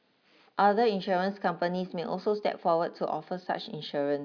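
No technical faults can be heard anywhere in the speech.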